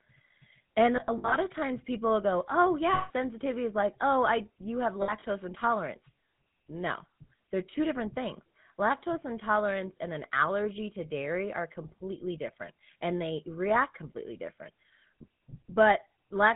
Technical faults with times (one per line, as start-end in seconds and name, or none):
0.00-16.55 GSM full-rate codec
0.96-1.36 lost GSM frames
2.94-3.11 lost GSM frames
5.02-5.23 lost GSM frames